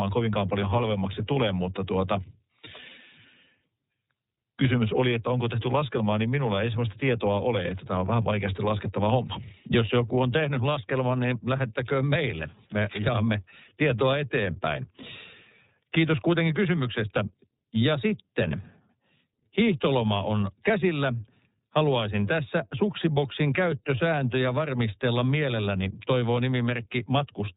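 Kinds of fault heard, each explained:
iLBC codec: The speech was squeezed through a narrowband VoIP codec that codes the excitation of each frame on its own, without leaning on the previous frame, and nothing above 4 kHz gets through. The result is plainly audible: the voice sounds muffled and telephone-like, with a rough, slightly synthetic texture all the way through, and the roughness fits 30 ms frames coded at the lower iLBC rate of about 13.3 kbps.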